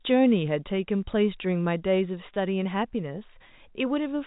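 At 2.34 s a single packet of about 20 ms goes missing, and the receiver covers it with packet loss concealment by pitch repetition, replaying the last pitch period. The speech briefly holds a slightly buzzy, sustained tone before resuming over the G.711 telephone band.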